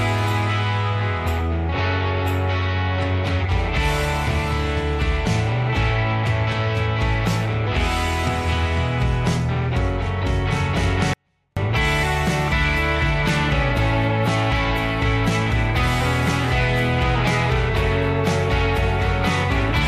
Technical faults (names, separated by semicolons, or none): 24-bit alignment error (too quiet)